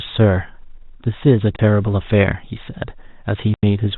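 Packets went missing in transmission and the receiver substituted silence, which is packet loss filled with silence: at 1.56 s a 30 ms gap opens, and at 3.54 s a 90 ms gap, consistent with one and then three lost 30 ms packets. Each hole cuts the speech abruptly with hard edges, over the narrow telephone-band sound of the G.711 line.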